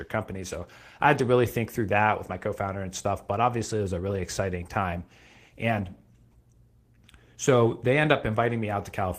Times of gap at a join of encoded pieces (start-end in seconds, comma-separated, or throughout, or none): none